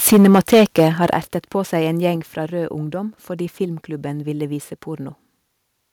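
From 0.06 to 1.06 s the speech is harsh and crackly on its loudest syllables. This is microphone overload. The input was likely set too high, so peaks ran about 7 dB past the converter's limit. Their tops were sliced flat, across a few percent of samples.

At 0.13 s the level dips by about 2 dB. At 1.14 s, just before "ertet på seg en", it drops by about 8 dB. Each drop is sudden, and the background falls with the speech. This is the microphone volume stepped down. The call software likely cut the input gain after detecting the clipping.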